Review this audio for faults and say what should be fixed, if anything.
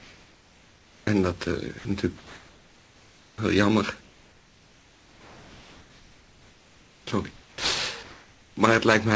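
Comfort noise in place of the background fills 0.00–1.07 s, 2.18–3.38 s, 4.01–7.07 s, 7.31–7.58 s and 8.03–8.57 s. The real background turns into steady, featureless hiss, about 1 to 5 dB quieter. This is likely discontinuous transmission, with the receiver synthesising noise during pauses. Sending continuously, or using a better background noise model, would prevent it.

Sound dropped by the voice detector occurs at 1.79–1.85 s. About 60 ms of sound vanishes and steady noise stands in for it. The detector likely judged that stretch to be background and stopped sending. Setting a longer hangover, or a less aggressive detector, would prevent it.

Onset clipped by the voice detector occurs at 3.36–3.38 s and 7.55–7.58 s. The sound starts abruptly, with 20 ms and 30 ms of its beginning lost to comfort noise. The detector was likely slow to notice the restart. Adding look-ahead or a faster, more sensitive onset trigger would prevent it.

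Nothing is heard above 8 kHz, which fits a wideband call codec such as G.722.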